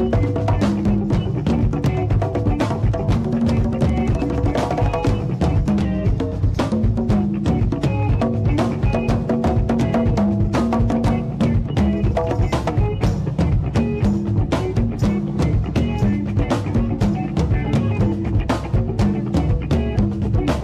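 At 5.85 s the audio suddenly drops in pitch and slows down together, sitting about 97 cents flat, so just under a semitone, with the speed down by 5.43%. It holds there for roughly a second before snapping back at 6.87 s. That's likely a drift correction step, where clock-matching software changed the playback rate in one jump to rebalance its buffer. Real corrections stay well under 1%, so this one is gross.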